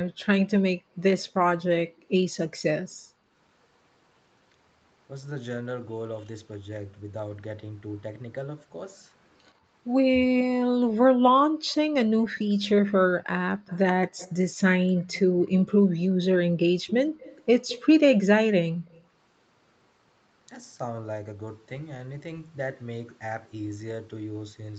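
From 0.76 to 3.31 s the background is gated by the echo canceller. While the loudspeaker side was active, the canceller pulled the microphone down by up to about 40 dB, so the room sound drops out for roughly a second in total. Shorter dips of the same kind follow at 15.3 to 16.13 s and 18.71 to 18.85 s.

Between 11.67 and 15.49 s, again at 16.7 to 17.85 s, and briefly at 18.85 to 19.04 s, a faint copy of the speech trails the original by 116 ms, sitting well below the main signal. This is likely echo leak, where the far end's echo canceller passed part of its loudspeaker pickup back into the call.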